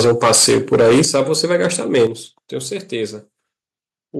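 Speech, with microphone overload from the start to 2.06 s. Peaks run about 14 dB past the converter's limit, and around a tenth of the samples are flattened. The loudest syllables crackle harshly. The likely cause is an input volume set too high for the converter. The microphone volume is stepped down three times, at 0.05 s by about 2 dB, at 1.05 s by about 8 dB, and at 2.07 s by about 7 dB. Voice and background drop together each time. This is likely the call software cutting the device gain after hearing clipping.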